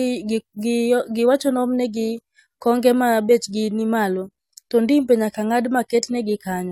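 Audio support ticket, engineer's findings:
Listened through the speech and nothing turned up worth flagging, so there are no findings to log on this one.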